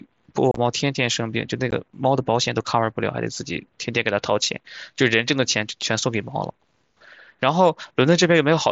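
Around 0.51 to 0.58 s there's unconcealed Bluetooth headset packet loss: roughly 45 ms of the mSBC link drops out across 60 ms, the longest hole 30 ms, and gets filled with silence or an idle pattern, so the speech has short holes with abrupt edges. Another short abrupt-edged gap hits at 1.71 s.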